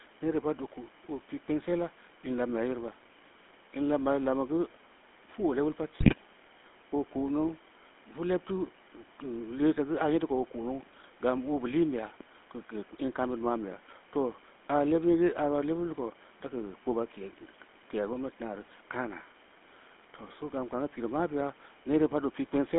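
From the start, the speech carries the sound of the GSM full-rate codec. Voices come out buzzy and gravelly. The codec rebuilds each voice from a vocal-tract model driven by spaced pulses. Fine detail is lost. Only about 200 Hz to 3.6 kHz gets through. This fits a 13 kbit/s stream.

From 6.0 s to 6.15 s, GSM bit errors break in. Flipped bits corrupt the filter, pitch and gain values reaching the decoder. The speech squawks, pops and gargles. The burst's length fits about seven damaged frames. Its harshness points to a heavy error rate of around 5 to 6 percent.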